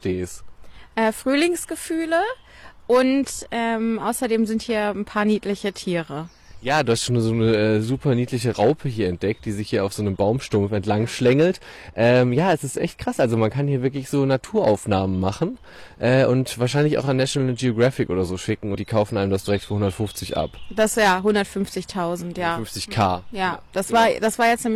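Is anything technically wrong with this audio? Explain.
Yes, there are two faults.

Hard clipping runs through the whole clip. The signal is driven about 8 dB past what a stage in the chain can pass, so peaks are cut flat. Around one percent of samples hit the limit. The flattened tops add high harmonics, heard as crackle and harsh fuzz on loud moments.

Damaged data in a compressed stream appears from 18.71 to 18.75 s. Part of the stream there is corrupted, so the decoder misreads frames and loses sync until it finds the next valid header. It is heard as a short squawk or blip.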